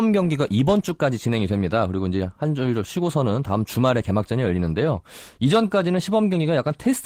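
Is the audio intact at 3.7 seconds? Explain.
Yes, the audio is intact at 3.7 seconds: the speech there carries no fault, only the light, even colouring of the Opus voice compression running across the whole clip.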